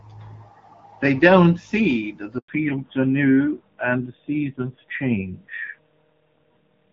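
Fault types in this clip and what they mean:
Handover gap: At 2.38 s the speech fades out within a few tens of milliseconds and stays silent for 100 ms, until 2.48 s, as the call switches from one network to another and no speech frames get through. Anything said in that stretch is simply gone. Unlike a scattered packet-loss dropout, it is a single clean hole, and the sound that resumes after it has a different character, marking the change of link.
Fallback to narrowband: From 2.48 s to the end, everything above 4 kHz is missing, so the speech turns dull and boxy and picks up a rougher, grainier texture. Before the gap, the HD Voice wideband sound carries content up to 7 kHz with only light coding damage. The drop fits a move from a 12.65 kbit/s wideband codec to a 7.4 kbit/s narrowband one. A plain low-pass filter would only remove the highs, but this change starts abruptly at the handover and also adds the harsher low-rate codec roughness.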